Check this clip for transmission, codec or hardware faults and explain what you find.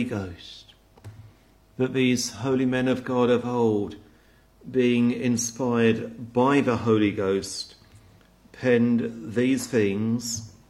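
Nothing stood out on listening; the audio carried no audible transmission, codec or hardware problem.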